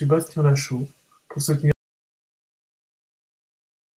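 At 1.72 s the speech cuts off abruptly and an audio dropout to silence runs to the end: pure silence, with no room tone or decay. The input was likely lost while recording continued. A gate or fade would instead tail off gradually.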